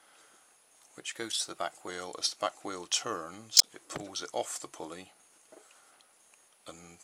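From 1.12 to 1.88 s the audio suddenly runs 6.15% fast and about a semitone sharp (103 cents), then snaps back, likely a drift correction step in clock-matching software. At 3.57 to 3.64 s a brief garbled glitch peaking near -10 dBFS marks a corrupt frame decoded, with damaged data across roughly two frames played anyway.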